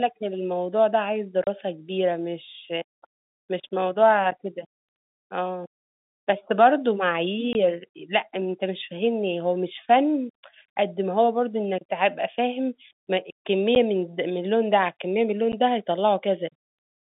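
Packet loss filled with silence punches holes at 1.44–1.47 s (30 ms), 7.53–7.55 s (20 ms), 13.75 s and 15.52 s (10 ms each). Gap lengths in 10 ms steps suggest 10 ms packets. The holes are true silence with hard edges, not repeated or smeared audio from concealment.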